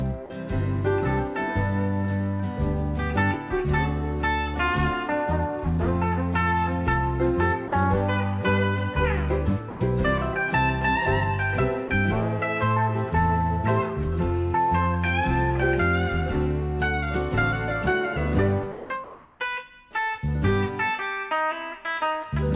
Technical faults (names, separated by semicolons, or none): sound dropped by the voice detector; comfort noise in place of the background